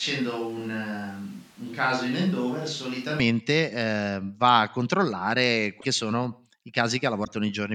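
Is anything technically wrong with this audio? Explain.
Yes, two things. From the very start until about 3.2 s the speech sounds roomy and hollow, thin in the bass, roughly 5 dB quieter, with more background noise. That's likely a switch to a distant microphone, with the close mic's signal missing.

Then at 5.80 to 5.85 s and 7.24 to 7.28 s there are short glitches where the audio skips ahead, likely a broken MP3 bit reservoir. After a cut, the next frame pulls leftover data from the wrong frame, which fits 24 ms frames.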